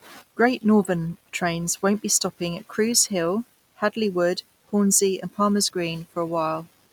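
Nothing in the recording stood out as a problem on listening.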